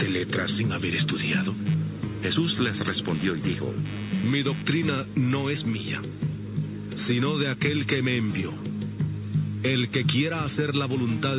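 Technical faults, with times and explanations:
1.66–4.70 s, computer activity noise: a scratchy buzz pulsing roughly a hundred times a second sits about 20 dB below the sound and tracks the machine's workload, not the audio, as shifting processor or graphics load currents disturb the audio circuit's shared ground.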